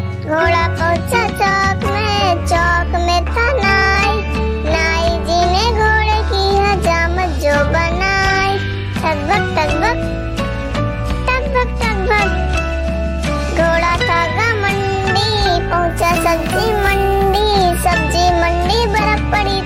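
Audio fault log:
15.90–17.40 s, crude rate conversion: a gritty, inharmonic fizz rides the louder, brighter parts, likely from samples being repeated to step roughly 32 kHz up to 44.1 kHz, with no filtering.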